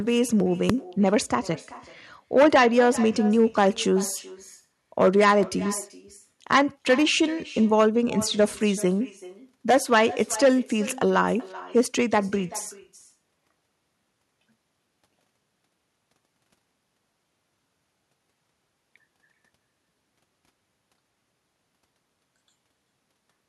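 At 0.70 s a single sharp bang cuts through: invalid numbers at full scale. A calculation produced infinite or undefined values that were forced to maximum output for about 1.3 ms, which fits a 64-sample block. A dropout goes silent, but this block slams to one extreme value far beyond the audio's peaks, so the short burst lands as one loud hit.

Throughout the clip there is echo with no canceller. The speech returns after roughly 0.4 s, about 19 dB quieter and thinner, as the far end's loudspeaker feeds its microphone uncorrected. Room reverberation smears continuously, whereas this is a distinct delayed repeat trailing each phrase.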